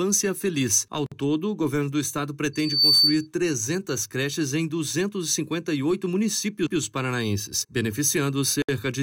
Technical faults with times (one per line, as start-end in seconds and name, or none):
1.06-1.12 gap at a join of encoded pieces
2.53-3.27 loudspeaker feedback squeal
8.62-8.69 gap at a join of encoded pieces